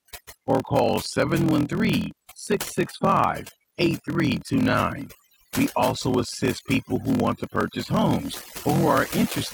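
From the start and throughout, overdone noise removal is audible. The reduction was set too hard, so frequency bands near the estimated noise floor are pulled far down or switched off, taking quiet speech detail with them. The background collapses to near silence dotted with twinkling specks.

Also running for the whole clip is a block size mismatch (padded). The writing stage hands over shorter blocks than the reading stage expects, and zeros fill the remainder, leaving a brief gap in every block. This produces a steady buzz at about 41.7 Hz, and the speech plays back at 0.889 times normal speed while holding roughly its normal pitch. That ratio fits 1024-sample blocks being read as 1152-sample blocks.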